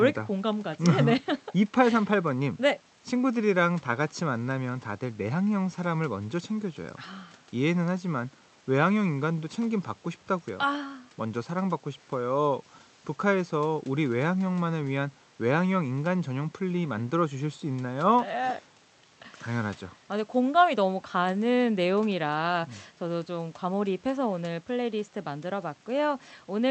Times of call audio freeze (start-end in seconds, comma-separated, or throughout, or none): none